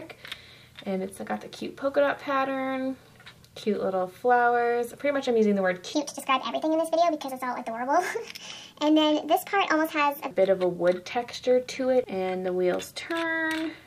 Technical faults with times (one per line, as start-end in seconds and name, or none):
5.94-10.31 section at the wrong speed